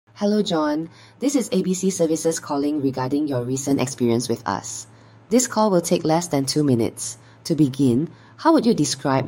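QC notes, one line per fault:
0.00–3.71 s, channel delay (comb filtering): one channel runs roughly 10 ms behind the other, and when the two are folded to mono the shared content cancels at regularly spaced frequencies, the first notch sitting near 50 Hz with further dips about every 100 Hz above it. The result is a fixed comb of holes through the spectrum, giving the sound a hollow, phasey quality until the channels come back into line at 3.71 s.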